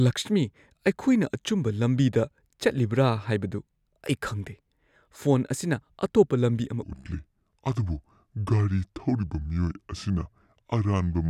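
From 6.83 s to the end at 11.30 s, a section at the wrong speed plays at about 0.72 times its original rate. Pitch drops by about five semitones and the talker sounds deep, slow and drawn out. The likely cause is playback or resampling against the wrong clock. On a spectrogram, harmonics and formant bands shift abruptly downward at 6.83 s and sit closer together. On the waveform, syllable envelopes stretch noticeably longer.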